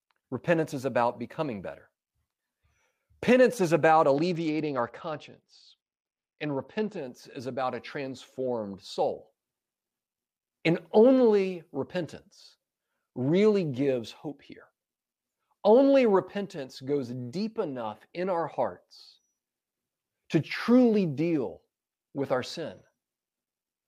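A speech recording with a Bluetooth SBC bit pool drop from 4.17 to 6.97 s. Across that span the treble dulls as the upper sub-bands are starved of bits, and a gritty quantisation noise rides on the remaining bands until quality recovers. The degree of loss fits a bit pool cut from about 31 to 11, near 83 kbps. Unlike a dropout, the sound never stops, and unlike a simple low-pass, grit accompanies the dullness.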